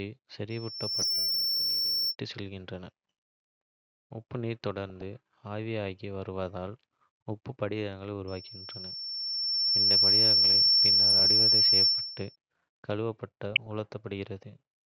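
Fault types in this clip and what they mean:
Loudspeaker feedback squeal: The mic is catching its own loudspeaker, so a 5.4 kHz tone runs away. It swells over under a second from 0.50 to 2.15 s, then more slowly from 8.27 to 12.36 s, ending up about 10 to 15 dB over the speech.
DAB burbling: Weak reception lets bit errors slip past error correction into the MP2 data, so single sub-bands jump in level. That gives bursts of burbling at 0.97–1.12 s, 4.90–5.02 s (just before "ஆவியாகி வருவதால் உப்பு"), 9.33 s, 11.08–11.42 s and 13.52–13.72 s.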